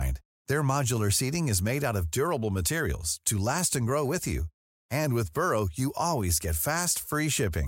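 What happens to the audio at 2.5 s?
Nothing goes wrong at 2.5 s: the speech carries on intact, with no break, dropout, glitch or other fault at that point.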